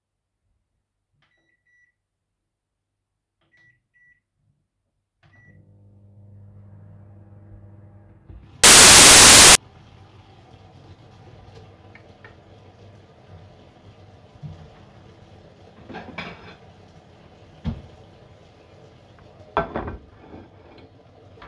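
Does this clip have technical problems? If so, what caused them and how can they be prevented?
Yes. File tags played as audio, from 8.64 s to 9.55 s: for just under a second the sound is replaced by a burst of very loud white noise with abrupt edges. The player read a tag block holding an embedded cover picture as if it were audio samples. Because the image data is compressed, its bytes look random, so they decode as flat, very loud hiss rather than anything tonal. Prevent it by using a decoder that parses and skips metadata blocks correctly, or by stripping embedded artwork before playback.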